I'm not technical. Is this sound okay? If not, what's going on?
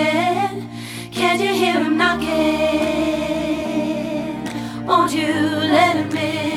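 Yes, nothing here sounds wrong or broken.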